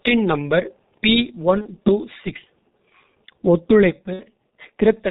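Throughout, the speech is muffled and hoarse, with nothing above 4 kHz and blurred consonants. This points to the G.723.1 codec running near 6 kbit/s in 30 ms frames. Its slowly updated voice model gives a rasp that a simple low-pass filter would not.

At 1.61 to 1.69 s, VoIP packet loss concealed by the speech codec leaves a brief stretched sound, consistent with one lost 30 ms frame. Unlike a dropout, there is no silent gap. The decoder extrapolated the last sound and faded it.

At 4.13 to 4.22 s, a longer concealment fits two lost frames. The smeared, fading sound lasts longer, and the voice stays weak or distorted for tens of milliseconds or more afterward while the decoder recovers.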